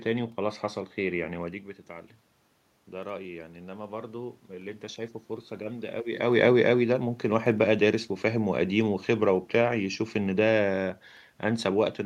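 A speech recording with automatic gain rising from 2.91 to 6.05 s: after the level drops about 12 dB, the AGC slowly adds about 6 dB, swelling voice and room noise together.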